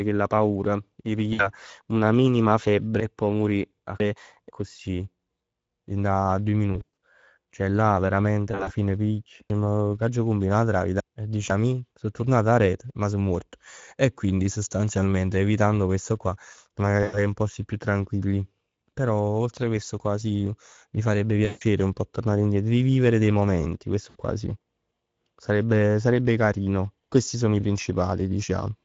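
Right through the clip you can hear the Speex codec at work. The speech has that hoarse, plainly noisy CELP grain, and the top end sounds like a shaped hiss rather than real detail. That points to a mid-quality mode of around 16.8 kbps, where there aren't enough bits to carry the excitation cleanly.

The first dropout is at 1.33 to 1.49 s. It's VoIP packet loss concealed by the speech codec: about 60 ms of audio is missing and the decoder papers over it by stretching its last pitch and filter into a fading stand-in.

From 3.0 to 4.5 s you get chunks out of order. A 500 ms block lands two chunks late, so it plays after the audio that should have come after it. Nothing is actually lost, but the passage sounds jumbled, with hard joins.

The concealment comes back several times. Right after "dint a doje", at 6.73 to 6.92 s, about 160 ms goes missing in scattered bursts, the longest around 100 ms, and the gaps are filled with stretched, weakening sound. 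At 8.51 to 8.71 s there's about 100 ms of loss spread over 160 ms. Each time, the voice stays thin for a moment after the packets come back, because every frame is decoded from the damaged one before it.

The order goes wrong again at 9.5 to 11.5 s, this time with a 500 ms chunk three chunks late, which gives a longer garbled stretch.

Three more losses follow. At 17.03 to 17.19 s, between "questo qua me ne" and "in posti più", about 100 ms is filled in by the decoder. At 21.45 to 21.63 s about 160 ms goes, filled in by the decoder. Last, at 24.09 to 24.16 s, between "e rivivere dei momenti" and "qua sì", there's a brief 60 ms blip of concealed loss.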